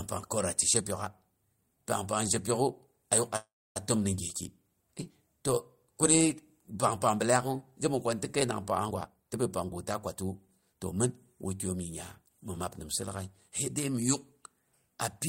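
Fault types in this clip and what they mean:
Call audio freeze: packets were likely held up in transit and the jitter buffer ran dry, so the receiver stretched the last sound into a fading buzz or hiss, then roughly 0.29 s of silence, from 3.36 to 3.77 s between "zhepyok'u a yuk a" and "a təm ni gyeki", resuming without losing anything.
Jitter buffer speed-up: too much audio had built up in the jitter buffer, so the receiver trimmed out short pitch-period slices again and again, dropping around 0.4 s in all. From 8.88 to 11.73 s, after "ko ni tɨ kəinang", the speech runs about 14% faster at an unchanged pitch and sounds hurried.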